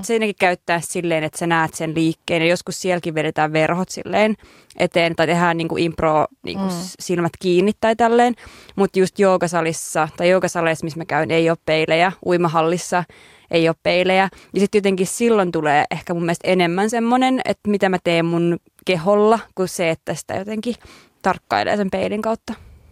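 Nothing stood out as a technical problem when listening to this speech recording.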